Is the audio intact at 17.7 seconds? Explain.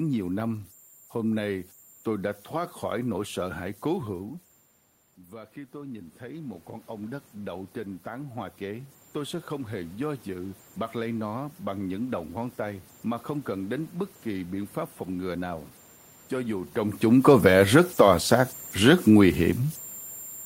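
No. At 17.7 seconds, as throughout the whole clip, a whistle of around 7 kHz sits in the pauses, with a grainy hiss under the quieter stretches of speech, roughly 27 dB below the speech itself. These are converter idle tones. The delta-sigma converter runs without dither, so when the input is small it settles into repeating bit patterns, and those cycles come out as a steady high tone rather than as smooth, random noise.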